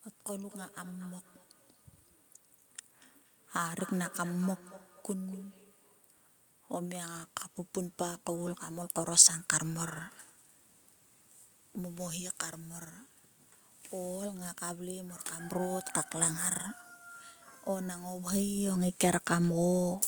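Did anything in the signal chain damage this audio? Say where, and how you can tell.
Yes. Feedback echo between two devices damaged the call-processing stage from 0.41 to 6.09 s. Each stretch of speech returns about a fifth of a second later, peaking about 19 dB below the direct speech. A second device in the room played the call aloud, and the first microphone picked it up again, outside the reach of its own echo canceller. On a spectrogram, faint copies of each speech pattern trail it at a steady offset. The waveform shows a low repeated envelope after each burst.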